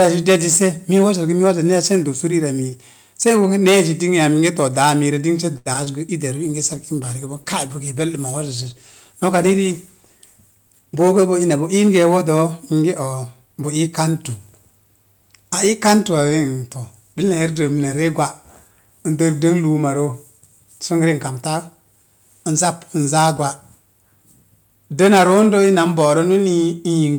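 Speech, with hard clipping throughout. It is overdriven by about 11 dB, so a small share of peaks are cut flat and crackle harshly. At 5.57 to 5.68 s there is a short stall from a late packet. The sound is held for 82 ms, with nothing lost. Two short concealed packet losses follow, at 5.74 to 5.76 s and 5.84 to 5.92 s. Each loses 20 ms of speech, and the filled gaps give a brief smear. From 6.45 to 12.24 s a call bitrate drop makes the speech rough and muffled. The sound fits a fall from 64 to 20 kbps, lasting about 4.6 s at its worst. Within that stretch, 10.51 to 11.13 s has a jitter buffer speed-up. Speech runs at 112% speed with unchanged pitch, as about 70 ms is trimmed.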